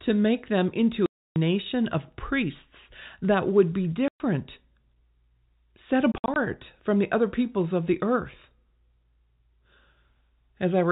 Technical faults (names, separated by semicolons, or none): packet loss filled with silence